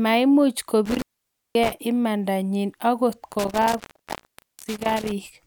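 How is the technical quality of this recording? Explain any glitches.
The recording is damaged by an intermittent contact, a loose cable or plug that briefly loses its connection twice. Each time the line opens, the speech drops out with crackle at the break and the join, leaving faint hiss until contact returns.

The first dropout falls between 0.86 and 1.72 s, with the line open for about 0.53 s, just before "imanda nyi angot".

The second comes just after "imanda nyi angot", between 3.32 and 5.12 s, and is longer, with the line open for about 0.83 s.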